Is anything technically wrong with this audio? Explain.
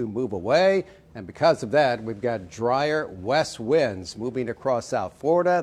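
No, nothing technically wrong stands out here; it all sounds just as it should.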